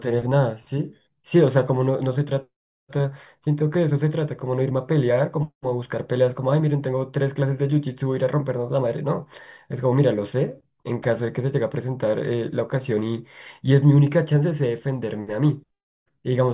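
Nothing in this bit of speech needs flagging, since no technical faults turn up anywhere in it.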